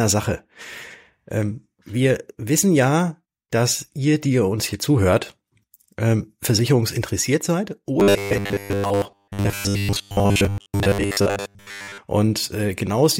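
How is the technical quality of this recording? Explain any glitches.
The recording has one clear fault. From 8.0 to 11.98 s, the speech becomes robotic sound from repeated short buffers. New audio likely arrives too slowly, so a 10 ms slice is replayed over most of that stretch. This imposes a rigid, metallic 100 Hz buzz.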